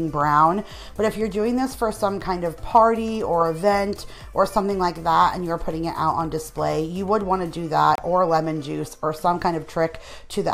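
At 7.95 to 7.98 s the sound drops out for about 28 ms and then resumes, a Bluetooth stall most likely caused by delayed packets letting the receiver's buffer run empty. The waveform shows a flat gap, and the spectrogram a clean vertical blank band.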